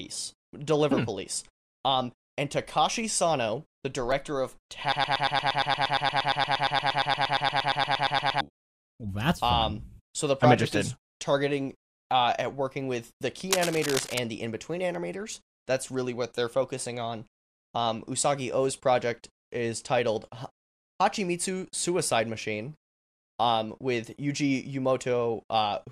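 From 4.92 to 8.41 s the speech locks into a broken-record loop: a 117 ms fragment repeats exactly, back to back, some 30 times, and the speech that belonged in that span never plays. The likely cause is a stalled player, encoder or stream resending its last buffered piece.

Between 13.51 and 14.19 s, cable scratch noise sits over the speech as dense, uneven scratching bursts, only slightly quieter than the speech itself. This likely comes from a worn cable, connector or control being moved, with its contact resistance fluctuating rapidly.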